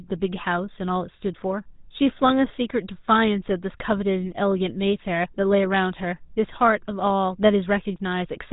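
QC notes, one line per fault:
Throughout, GSM full-rate codec: the speech carries a buzzy, gravelly roughness from a vocal-tract model driven by regular pulses with sparse excitation, which fits a 13 kbps GSM full-rate stream; a spectrogram shows a hard ceiling with nothing above 3.8 kHz and coarse, comb-like harmonic texture below.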